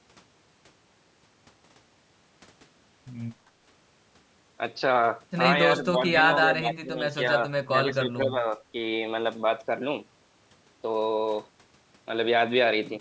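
From 5.78 to 6.16 s, the talker's level sags by about 10 dB. It then drops harder, by about 20 dB, between 6.38 and 6.99 s, and again by about 15 dB from 7.68 to 8.59 s, breaking up in chunks that add up to around half a second. That's likely speech suppressed in double talk: the echo canceller mistook the talker for loudspeaker echo while the far end spoke and turned both down. The call's microphone processing leaves nothing above 8 kHz.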